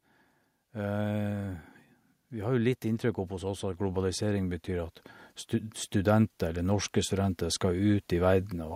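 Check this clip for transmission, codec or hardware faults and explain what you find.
One fault stands out: automatic gain rising, running from 2.3 s almost to the end at 8.71 s. The automatic gain control judged the incoming speech too quiet and kept raising its gain, by about 12 dB overall, so the voice and the background noise grow louder together rather than the voice alone. On a waveform the envelope widens steadily across those six seconds, and a spectrogram shows every band, including the noise floor between phrases, brightening in step.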